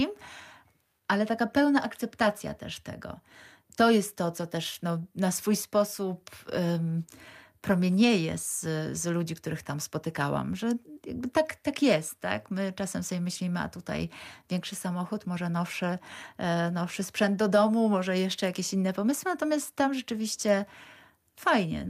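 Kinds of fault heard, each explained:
No technical faults are audible anywhere in this speech recording.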